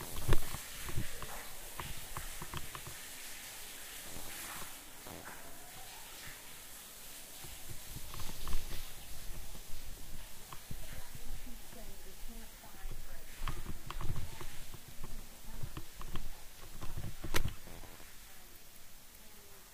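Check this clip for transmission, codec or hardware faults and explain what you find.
Nothing wrong can be heard anywhere in these sounds.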